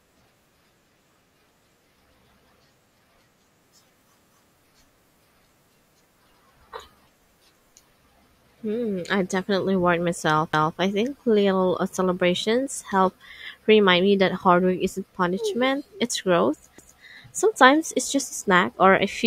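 Speech clip with overlapping chunks: a 250 ms stutter repeats at 10.53 s after "I definitely worried myself" and 16.78 s after "isn't punishment it's growth", 6.25 seconds apart, so each 6-second chunk restarts early.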